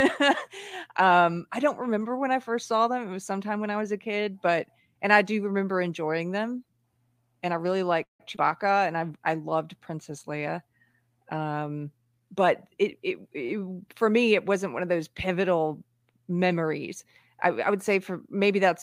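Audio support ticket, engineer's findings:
Call audio freeze, 8.03–8.21 s: the preceding sound carries on briefly, then about 130 ms of silence before audio resumes where it left off. Nothing lost, but delay grows by 161 ms. Likely cause: jitter buffer ran dry while packets were held up in transit.

Short concealed packet loss, 8.35–8.38 s: brief smear in the audio just after the freeze. Roughly 40 ms of audio never reached the decoder in time. The receiver bridged the hole by extending the last sound, then blended back in. Delay drops about 30 ms.

Jitter buffer speed-up, 12.05–13.46 s: audio runs at 108% speed with pitch unchanged and sounds hurried. Buffer overfilled, so the receiver repeatedly cut short pitch-period slices, trimming around 100 ms of backlog to reduce latency.

Short stall from a late packet, 13.46–13.60 s: a sound is held too long, with a slight buzz or dip, right after the speed-up. 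A packet was missing when due, so the receiver stretched the last sound by 25 ms until it arrived. No content lost, and delay rises 25 ms.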